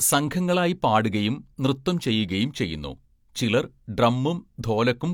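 A speech recording, with nothing technically wrong with it.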